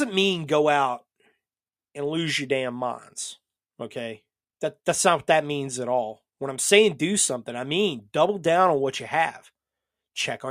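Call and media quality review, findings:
Nothing to flag here; the speech comes across without any audible technical problems worth a ticket.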